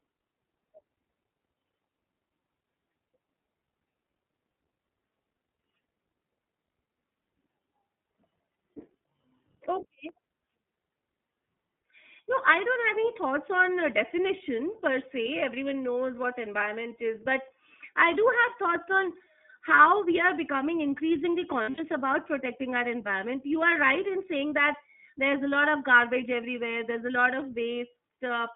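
iLBC codec, throughout: the whole recording sits inside a telephone band running from 200 Hz to 3.5 kHz, so the speech loses its low body and all its upper sibilance and air. Each short slice is coded independently of the one before, and here the damage is plainly audible. Voices take on a rough, slightly synthetic edge. The texture points to 20 ms frames at roughly the 15.2 kbps mode.

Dropped samples, at 10.09 s: a single sharp click cuts through the speech, showing as a thin vertical line across the spectrum. The waveform jumps abruptly from one value to a later one, which points to a tiny stretch of audio, well under a millisecond, going missing. That is far too short to remove any sound. The likely cause is a momentary sample loss in the stream rather than anything in the recording itself.

Lost iLBC frames, from 21.62 to 21.80 s: over about 160 ms, roughly 120 ms of audio fails to arrive, in scattered gaps whose longest run lasts around 70 ms. 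The decoder fills each hole by repeating the last pitch cycle mixed with noise, so the speech briefly smears into a held, buzzy, breathy vowel. Because each frame stands alone, the speech snaps back almost at once after the last gap.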